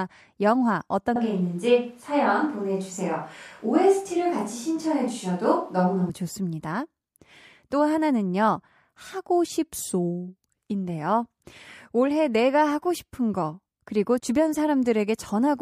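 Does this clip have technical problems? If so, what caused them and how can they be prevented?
Yes. From 1.16 s to 6.09 s the speech abruptly turns roomy and hollow, with thinner bass, then snaps back just as suddenly. This is likely a switch to a distant microphone, where a farther pickup captures more room reflection and less low-end proximity. The level barely changes, and background noise sits roughly 35 dB below the speech. On a spectrogram the low-frequency band thins and reverberant smearing fills gaps between syllables; the waveform shows softer transients with tails. Prevention: monitor the close microphone's feed during recording and keep a backup close mic so the distant one is never the only source.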